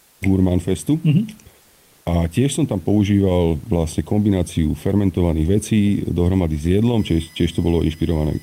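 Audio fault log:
Throughout: channel delay (comb filtering). The sound is hollow and slightly phasey, with a fixed coloration that doesn't move as the material changes. One channel arrives a fraction of a millisecond late, roughly 0.4 ms, and when the two are summed to mono the shared content cancels at evenly spaced frequencies. The first notch falls near 1.5 kHz and further notches repeat up the spectrum, carving fixed gaps that dull the upper midrange.
0.00–0.21 s: comfort noise in place of the background. For the first 0.21 s the background is a steady, featureless hiss, about 1 dB quieter than the real room noise that follows, and lacking its texture. The likely cause is discontinuous transmission, consistent with Opus DTX: the sender stopped transmitting during a pause, and the receiver filled the gap with synthetic noise shaped roughly like the background until real audio resumed.
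6.98–8.43 s: USB whine. A fixed-pitch tonal whine enters and holds to the end, built on a 1 kHz fundamental with its strongest component at 4 kHz, sitting about 25 dB below the signal. The USB bus draws current in 1 ms frames, and that periodic load leaks into the audio through shared power or ground. The result is a tone at the frame rate and its multiples, and here the fourth harmonic dominates.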